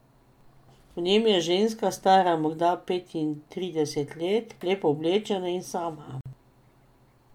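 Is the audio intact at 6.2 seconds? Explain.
No. At 6.21 to 6.26 s, separately encoded pieces were joined untrimmed, so the encoder's start-up delay and last-frame padding stay in. This is a gap at a join of encoded pieces: right after "lepo oblečena in sama", the speech drops into a 49 ms gap with smeared edges, then resumes where it stopped.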